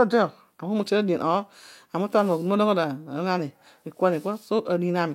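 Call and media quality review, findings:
Nothing stood out on listening to the speech in this clip.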